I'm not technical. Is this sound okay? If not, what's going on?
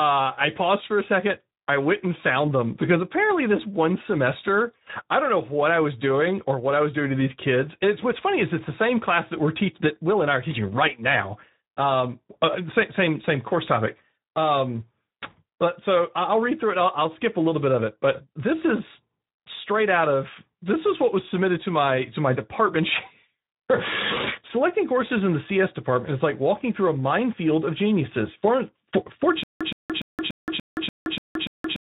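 No. The whole clip has Speex codec damage. This older voice-chat compression squeezes speech into very little data. So the voice sounds rough, noisy and hoarse. It also sounds muffled, because nothing is kept above about 3.8 kHz.

At 29.4 s a stutter with silent gaps begins and runs to the end. A short 0.12 s burst repeats eight times, with 0.17 s of dead silence between repeats. The player or stream likely stalled, and the speech meant for that stretch is lost.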